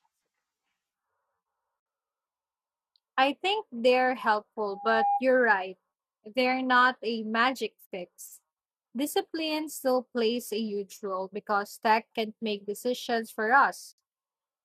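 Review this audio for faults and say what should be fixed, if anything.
The speech stops dead for about 60 ms at 1.80, 7.86 and 13.92 s, spaced exactly 6 s apart. These are gaps at a join of encoded pieces: each piece was encoded separately, and its leading encoder delay and trailing frame padding were left in as silence. Unlike a network dropout, the gaps fall on a strict grid, and the sound resumes exactly where it left off, with nothing missing. Trim each piece's encoder delay and padding before joining, or encode the whole recording in one pass.

From 4.71 to 5.24 s a single 808 Hz tone swells over about a third of a second into a loudspeaker feedback squeal, reaching roughly the level of the speech. The microphone is picking up its own loudspeaker, and at that frequency the loop gain exceeds one. Mains hum is steady and sits at a fixed low frequency, whereas this tone grows by itself and then stops. 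Lower the gain or notch 808 Hz in the monitor path, and keep the microphone out of the loudspeaker's coverage.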